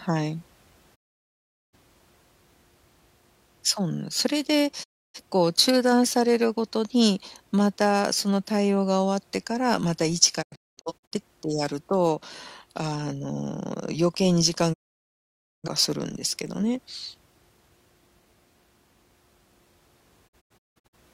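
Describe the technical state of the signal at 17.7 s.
At 17.7 s the speech signal is intact, with no dropout, clipping, glitch or other technical fault to be heard at that moment.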